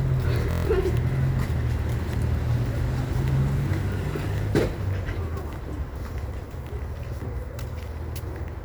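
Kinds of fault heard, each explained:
Bluetooth stutter: from 0.51 to 0.65 s, with incoming data missing, the receiver replays its last short buffer, giving a rapid buzzing repeat instead of the silence a plain dropout leaves. About 139 ms of sound is skipped, which fits roughly six lost packets.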